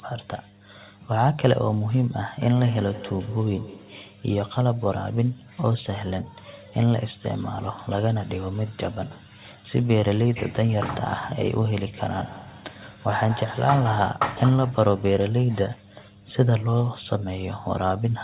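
From the first moment to the end, a steady 50 Hz mains hum sits under the speech, roughly 30 dB below it. A ground loop or nearby transformer is leaking the power line into the signal. Unlike rumble or room noise, it holds one fixed pitch whether anyone is talking or not, and it survives the call's bass filtering rather than being removed with the lowest frequencies.

A DC offset runs through the whole clip as well. The waveform is pushed off its zero line by a constant amount. It cannot be heard as a tone, unlike the hum. It shows only as energy at 0 Hz on a spectrum, and it eats into the available headroom.

From 2.41 to 4.27 s there is feedback echo between two devices. A second device in the same room replays the call audio, and this microphone picks it up again, beyond the reach of its own echo canceller. Each syllable returns at intervals of about 150 ms, thinner and more ringing each pass, peaking about 17 dB under the speech. 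The fixed, repeating spacing sets it apart from room reverberation, which smears rather than repeats.

The same echo returns from 11.93 to 14.39 s, slightly stronger at about 14 dB below the speech, again repeating at roughly 150 ms. It is heard through a narrowband line with nothing above 4 kHz, which fits the G.711 mu-law codec.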